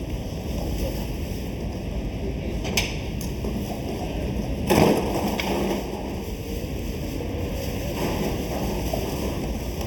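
From start to finish the audio sounds hollow and phasey, a quality that never changes. This is channel delay (comb filtering): one channel trails the other by something under half a millisecond, and when the two are summed to mono, the shared content cancels at evenly spaced frequencies. The first notch falls around 1.5 kHz, with further dips repeating higher up, giving the sound its fixed, combed colouring.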